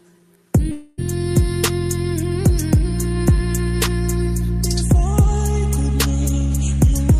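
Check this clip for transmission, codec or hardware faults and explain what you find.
One fault is audible. From 0.71 to 1.00 s there is a long network dropout. Audio likely stopped arriving, so the last sound stretches into a fading buzz. Playback then resumes with about 0.26 s skipped, far longer than a single lost packet.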